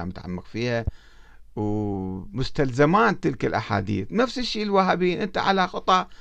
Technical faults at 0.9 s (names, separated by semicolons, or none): loud pop